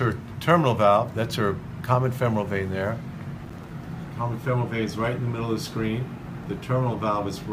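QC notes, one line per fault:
3.46–3.71 s, processor overload crackle: the processor falls behind and misses roughly ten buffer deadlines, with buffers around 5 ms long. Each miss leaves a hard-edged gap of silence, so this quarter-second breaks into gritty crackle before clearing.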